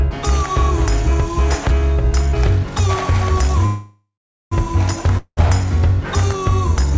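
The audio passes through a call codec whose band stops at 8 kHz, consistent with G.722. A call audio freeze runs from 3.66 to 4.53 s: the last sound smears into a fading buzz, then goes flat and silent. On the waveform this shows as a decaying tail followed by near-zero. The likely cause is a stalled jitter buffer, and the audio resumes intact about 0.86 s late. A long network dropout at 5.17–5.39 s shows a brief fading fill and a short gap on the spectrogram, and about 0.2 s of audio is lost, likely from undelivered packets.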